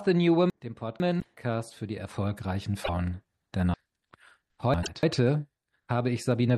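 From 0.5 to 1.37 s, chunks play out of order. A 500 ms chunk arrives one chunk late. Nothing is missing, but the sequence jumbles, with hard joins. At 1.19 to 1.25 s, a short glitch follows a jump ahead. This is likely a broken MP3 bit reservoir, where cut frames leave the next frame reading another frame's borrowed bits. The frames are 26.1 ms long. The same glitch recurs at 2.84 to 2.89 s. From 3.74 to 5.03 s, chunks are again out of order, this time two chunks late, with jarring joins. Another reservoir glitch lands at 4.82 to 4.88 s.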